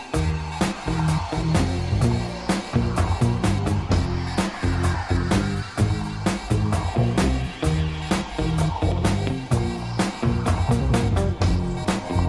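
No technical faults can be heard anywhere in this audio.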